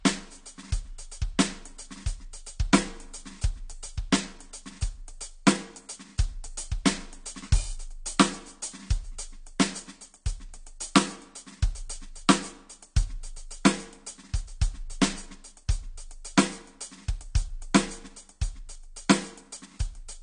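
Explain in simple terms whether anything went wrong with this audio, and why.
Throughout the music, the sound is dull and smeared, with nothing above about 9.8 kHz and a warbling, fizzy texture on held sounds. This is likely AAC compression: the encoder discarded fine high-frequency detail to shrink the file, leaving gaps in the sound.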